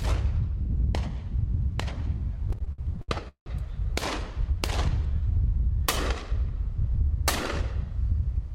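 A recording of everyday sound with repeated stalls (stutter) between 2.49 and 3.48 s: the jitter buffer kept running dry as data arrived late, so the receiver stretched the last sound across nine gaps, the longest 179 ms. That filling covers 386 ms, about 39% of the span, making the audio drag and stutter while nothing is lost.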